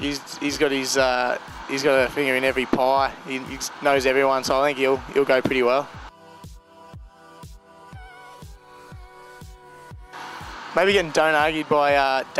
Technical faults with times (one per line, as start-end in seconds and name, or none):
none